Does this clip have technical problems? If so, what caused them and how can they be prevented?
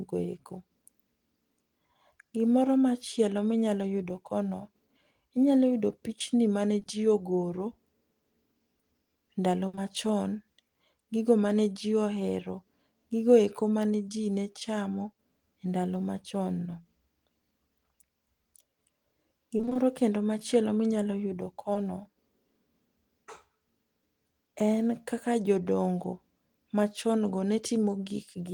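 Yes. Short concealed packet loss occurs just after "inyalo yudo pichni mane" at 6.79 and 6.83 s, again at 9.75 s, and after "kendo machielo minyalo yudo" at 21.73 s. Each time, about 20 ms of audio never arrived and was patched by extending the preceding sound, heard as a tiny smear or wobble. On a spectrogram, each patch shows as a thin vertical band where the harmonics stretch flat. Forward error correction or a slightly deeper jitter buffer would cover single lost packets like these.

A burst of packet loss runs from 9.67 to 9.75 s. About 60 ms went missing in a row, and the receiver continued the last sound while fading it down, so a held buzz or fading hiss replaces the real audio before it resumes further on. The waveform shows a decaying, overly regular stretch, and the spectrogram shows frozen, blurred harmonics. A more stable connection, such as wired rather than Wi-Fi, together with network quality-of-service priority for voice, prevents bursts like this.

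Repeated packet loss (robotic sound) fills 19.57 to 19.77 s, just before "kendo machielo minyalo yudo". Five separate 20 ms gaps were each patched in turn, so half of that stretch is synthetic fill, and it sounds choppy with pieces missing. On a spectrogram, the harmonics break into a striped, stuttering pattern. Fixing the underlying congestion or jitter on the link, with adaptive jitter buffering and redundancy, prevents this.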